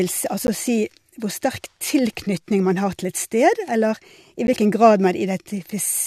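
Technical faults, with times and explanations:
0.47 s and 4.47 s, gap between stream segments: silences of about 13 and 11 ms, the second between "eller i" and "hvilken grad", where segment timestamps leave space on 2-second boundaries. Waveform drops to silence; spectrogram shows thin, hard-edged vertical blank stripes.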